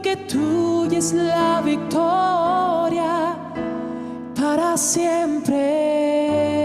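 No technical faults can be heard anywhere in this audio. There is nothing in it that needs a timestamp or a note of any kind.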